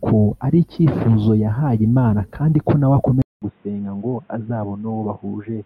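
At 3.22 s the speech drops out for 200 ms, then returns dull and boxy until the end. Nothing above 3.8 kHz remains. It is about 5 dB quieter, over a new noise floor well below the speech. The likely cause is the input switching to a poorer device.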